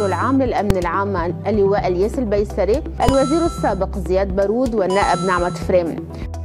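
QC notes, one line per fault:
0.70 s and 3.09 s: invalid numbers at full scale. Each burst is a single loud bang, about 3 ms long, which fits a 128-sample processing block whose invalid values were pinned to the maximum level. The waveform shows a flat-topped slab at one extreme value, well beyond the audio's peaks, and the spectrogram shows a bright full-band vertical stripe.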